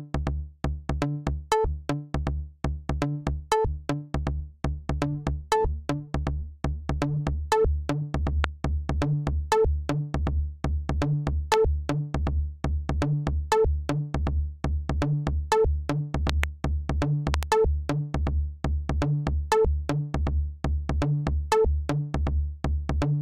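Sharp loud pops cut in above the sound at 8.44 s and 11.54 s, each a single brief crack roughly 20 dB louder than the material underneath. At 16.30 to 16.46 s and again at 17.34 to 17.45 s the pop comes as a quick double. The sound continues unbroken beneath each one. A likely cause is a sudden voltage step or pulse, from a connector, switch, static discharge or driver glitch, being added into the signal path.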